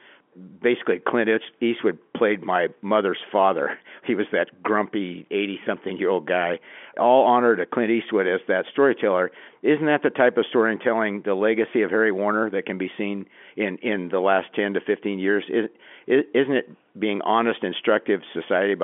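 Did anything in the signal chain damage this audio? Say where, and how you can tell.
No, nothing in the signal chain damaged this audio.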